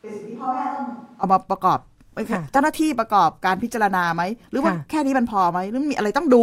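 Speech opens on a switch to a distant microphone, heard from the start until 1.23 s. The voice is roomy, hollow and thin, about 10 dB down. Room noise sits about 35 dB below it. The close microphone likely dropped out. Sound snaps back close at 1.23 s.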